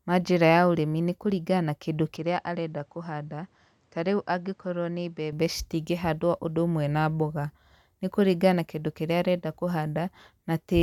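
Speech recording; from 2.17 s, after "na kĩndũ", to 5.33 s, before "citingĩhandwo ũndũ ũmwe na", the sound narrows with nothing above 9.2 kHz, drops roughly 5 dB, and gains a faint noise floor, likely an input switched to a poorer device.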